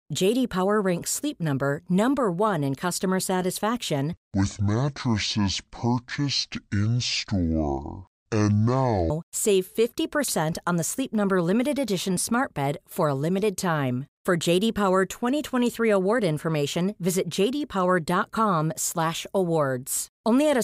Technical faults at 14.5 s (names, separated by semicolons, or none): none